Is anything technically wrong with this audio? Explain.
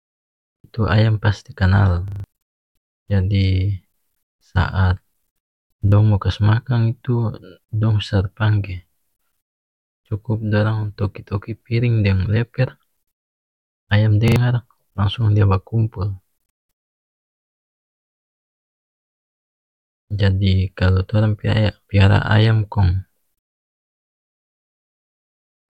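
Yes. A repeated buffer fault stutters the speech at 0.56–0.64 s, 2.08–2.24 s, 5.88–5.92 s and 14.28–14.36 s. Late-arriving audio made playback loop one 40 ms-sized chunk two, four, one and two extra times, with hard joins, losing roughly 70, 150, 40 and 70 ms.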